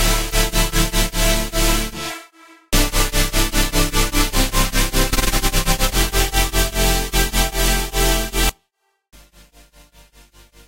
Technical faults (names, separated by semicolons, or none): audio dropout to a faint residue